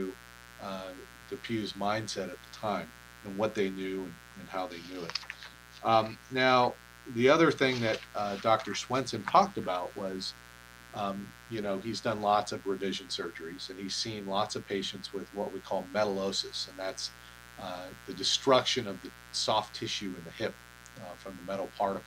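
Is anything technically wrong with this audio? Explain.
Yes. Mains buzz runs throughout the clip, built on a 60 Hz supply: sharp switching spikes from a dimmer, rectifier or unshielded lead enter twice per cycle, spraying harmonics up into the kilohertz range and giving a steady, raspy buzz sitting roughly 20 dB below the sound.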